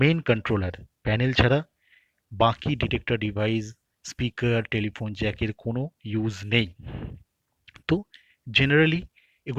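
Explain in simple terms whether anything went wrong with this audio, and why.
Nothing went wrong with this audio, so there is no fault to explain.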